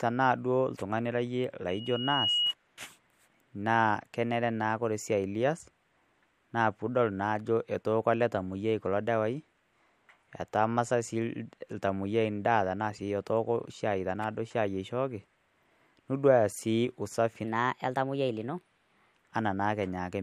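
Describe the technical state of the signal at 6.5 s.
At 6.5 s the speech signal is intact, with no audible technical fault at that moment.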